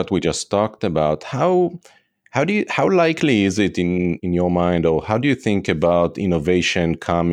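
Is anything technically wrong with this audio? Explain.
No, nothing in this speech recording stood out as a technical problem on listening.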